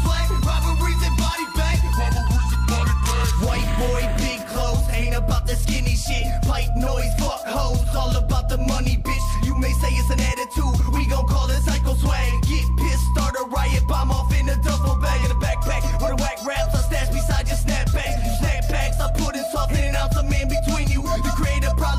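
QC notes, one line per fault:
No faults were found in this clip. There is nothing to log.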